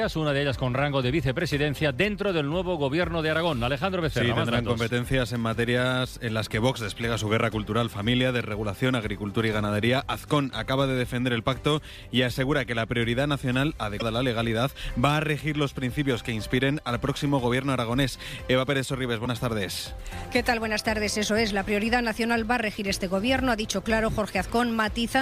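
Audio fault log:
13.99–14.02 s and 19.24–19.27 s, broken MP3 bit reservoir: each time the audio skips ahead with a brief glitch, about one 26 ms frame long, likely from frames reaching back for borrowed bytes after frames were cut and decoding another frame's data instead. A plain dropout would leave clean silence instead.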